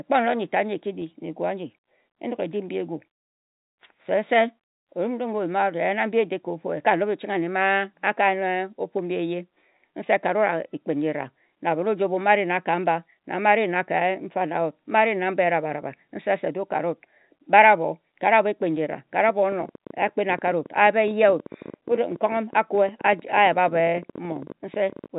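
From 19.29 s to 25.07 s, an uneven ticking runs over the speech at around 14.4 clicks per second, about a hundred pops in all, peaking roughly as loud as the speech itself. This train of clicks is likely interference or a faulty connection or power supply injecting repeated pulses, heard above the telephone-band sound that stops near 3.8 kHz.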